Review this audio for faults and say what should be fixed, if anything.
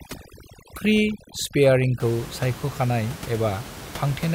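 Overdone noise removal from 0.0 to 2.0 s strips quiet speech detail along with the background noise, leaving near-silence with twinkling specks. A spectrogram shows scattered isolated dots in place of a continuous noise floor. After 2.0 s the room noise sits about 15 dB below the speech. Set the noise reduction to a gentler strength, or leave that room noise in place, rather than forcing every band near the noise estimate to silence.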